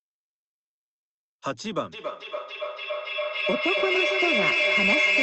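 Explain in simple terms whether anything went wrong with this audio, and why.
Two devices on the same call were picking up each other's playback, causing feedback echo between two devices. From 1.92 s onward the speech repeats about every third of a second, building louder than the original.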